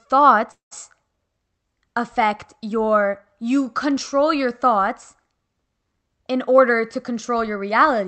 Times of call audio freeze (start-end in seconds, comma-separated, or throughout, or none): 0.51-0.73